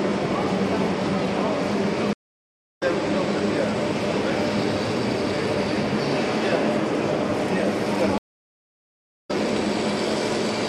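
At 2.13 s a stream reconnect leaves the audio silent for about 0.64 s before it returns at 2.83 s, skipping roughly half a second ahead. A second one at 8.18 s goes quiet for about 1.07 s and resumes at 9.31 s roughly one and a half seconds later. Unlike a simple dropout, the restarted decoder picks up the live stream at a later point, so the missing material is skipped.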